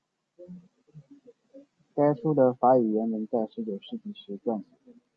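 No technical faults are audible anywhere in the speech.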